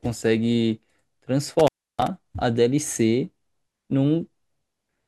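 From 1.59 to 2.07 s the speech drops out abruptly, with crackle at the edges and only faint hiss where the signal should be for about 305 ms. This is an intermittent contact: a loose cable or plug briefly opened and broke the connection.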